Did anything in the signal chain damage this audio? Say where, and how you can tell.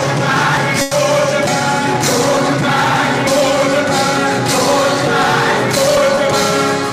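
Yes. There are skips at 0.57, 1.47, 2.37, 3.27 and 5.97 s, each butt-joined with no silence and dropping roughly a tenth of a second. That's audio missing between chunks, likely a capture or buffer stage working in 1-second chunks and losing a bit at every handover.

At 0.81 to 0.93 s there's a burst of packet loss on the network side. About 100 ms never arrived, so the receiver stretched the last sound for 100 ms, letting it fade, then jumped ahead, skipping over what was lost.

Around 6.15 to 6.19 s there's a short concealed packet loss, also a network issue. A 20 ms hole got patched by extending the preceding sound and blending back in, which comes across as a brief smear or wobble rather than a clean gap.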